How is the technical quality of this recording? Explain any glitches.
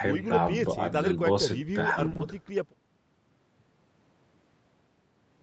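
There's one rough patch in this speech recording, lasting about a quarter of a second, from roughly 1.97 to 2.21 s. It's two kinds of network trouble back to back, heard through an Opus call path that tops out at 8 kHz.

From 1.97 to 2.07 s you get a lost packet rebuilt from error correction. About 60 ms of audio never arrived, which fits three separate lost packets. Opus had tucked a low-bitrate backup of each one inside the next packet, and the decoder played those backups instead. So nothing drops out, but that stretch sounds grainier and noisier than the audio around it.

Right after that come three short concealed packet losses, at 2.09–2.13, 2.13–2.17 and 2.17–2.21 s. In each one, 20 ms went missing with no backup copy, so the receiver improvised. It carried the last sound forward along its pitch, or as shaped noise if the sound was unvoiced, then faded back into the real signal. 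Three in a row give a brief smeared, wobbly stutter, and any short consonant there could be lost.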